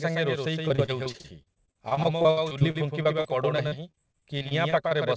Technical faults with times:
0.00-5.16 doubled audio track
0.68-4.93 repeated packet loss (robotic sound)

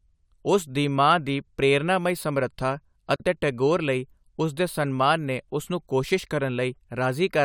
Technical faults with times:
3.16-3.20 gap at a join of encoded pieces

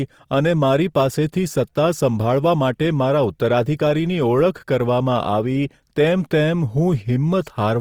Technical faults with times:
0.00-7.80 Opus compression

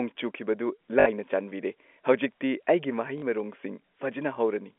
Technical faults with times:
1.00-1.06 packet loss with last packet repeated
3.18-3.22 packet loss with last packet repeated

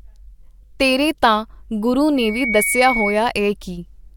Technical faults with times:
2.16-3.27 loudspeaker feedback squeal

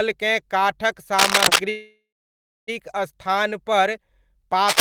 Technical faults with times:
1.18-1.59 cable scratch noise
1.69-2.70 call audio freeze
4.68-4.81 cable scratch noise

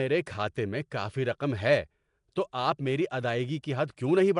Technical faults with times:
0.00-4.39 Nellymoser compression

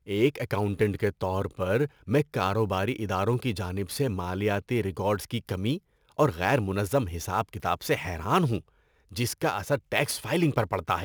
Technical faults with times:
0.00-11.04 sample clock jitter

